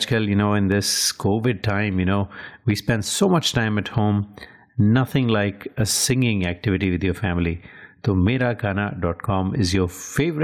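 Gain pumping runs through the whole speech clip. Loud and soft parts sit closer in level than they should, and the sound is squashed. The level swings by something like 15 dB. The likely cause is input gain set far too high, with a fast limiter clamping down.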